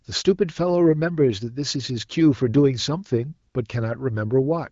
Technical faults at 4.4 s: none

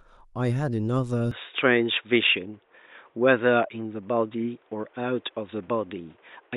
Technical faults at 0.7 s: none

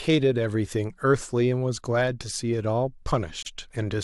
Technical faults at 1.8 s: none

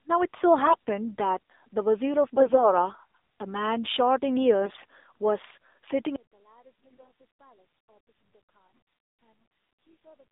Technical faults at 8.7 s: AMR narrowband mobile codec; one channel inverted; AMR bit errors

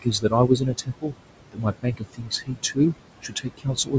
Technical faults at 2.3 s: noise suppressor artifacts; speech cut by the noise suppressor

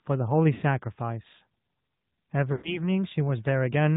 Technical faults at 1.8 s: AMR narrowband mobile codec

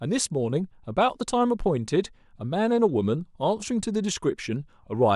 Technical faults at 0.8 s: none

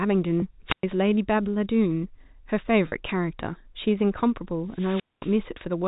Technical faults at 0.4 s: packet loss with pitch repetition

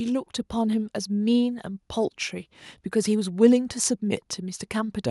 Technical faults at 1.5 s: none

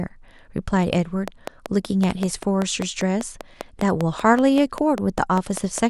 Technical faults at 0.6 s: none

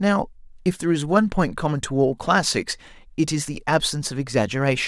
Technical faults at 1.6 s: none

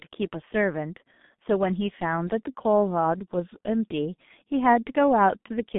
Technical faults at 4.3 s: G.723.1 codec

